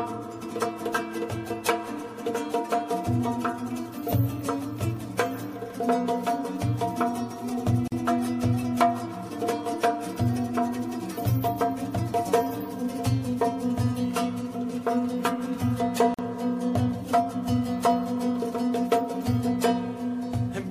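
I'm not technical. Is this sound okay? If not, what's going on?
No. The audio was put together from separate pieces that were each compressed on their own and then joined without trimming the bits of silence the compressor adds at the start and end of each piece. This is called a gap at a join of encoded pieces. You hear it as a brief dropout of about 43 milliseconds at 7.88 s and again at 16.14 s, with softened edges, before the sound resumes where it stopped.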